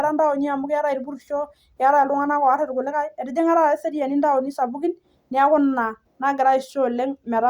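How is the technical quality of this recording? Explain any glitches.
Listening through the recording, nothing stood out as a technical problem or glitch.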